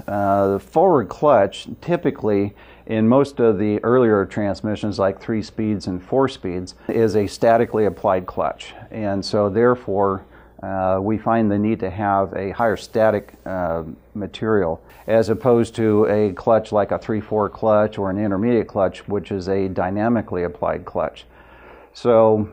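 Nothing in the audio stands out as a technical fault at any point, so there's nothing here to flag.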